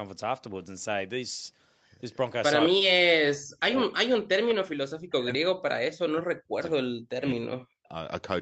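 From 2.7 to 5.93 s, and again from 6.09 to 7.93 s, the speech drops away, sinking by around 40 dB at its deepest. This is likely speech suppressed in double talk: with both ends talking, the echo canceller turned the near talker down along with the echo.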